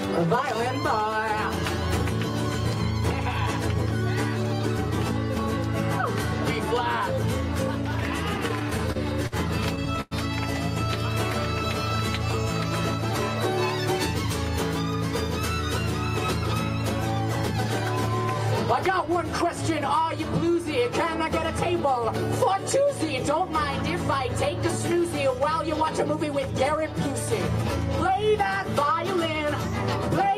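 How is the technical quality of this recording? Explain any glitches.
The recording has two bursts of repeated stalls (stutter), between 8.37 and 9.34 s and between 9.76 and 10.13 s. Packets arrived late, so the jitter buffer kept running dry and the receiver stretched the last sound to cover each gap. In the first burst there are seven short holds, the longest 51 ms, totalling about 125 ms. In the second there are four, the longest 101 ms, totalling 132 ms, which is roughly a third of that span. Nothing is lost, but the sound drags and stammers, and the longer holds fade audibly.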